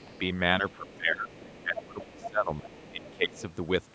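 From 0.00 to 0.19 s, faint far-end speech leaks through at about 30 dB below the talker, likely residual echo the canceller left behind. From 0.07 to 0.20 s the speech dips by around 10 dB, likely speech suppressed in double talk. From 0.62 to 3.39 s the same suppression returns, pulling the voice down by up to about 20 dB across roughly two seconds. During that stretch the other side's voice leaks through twice: faintly from 0.68 to 0.97 s, then more strongly from 1.33 to 3.42 s at about 15 dB below the speech.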